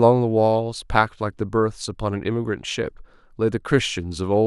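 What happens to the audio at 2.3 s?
Nothing goes wrong at 2.3 s: the speech there is intact, with no audible fault at that moment.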